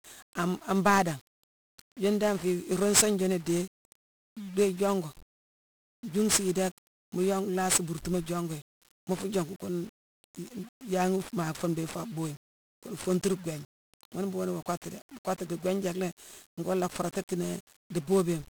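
Speech runs through 1-bit DFPWM compression for its whole length: one bit per sample nudges an adaptive level up or down, leaving dense broadband fuzz and crackle with treble buried in hiss, which fits a rate near 48 kbps. Unlike low-bitrate MP3 swirl, the damage is grainy noise, not warbling.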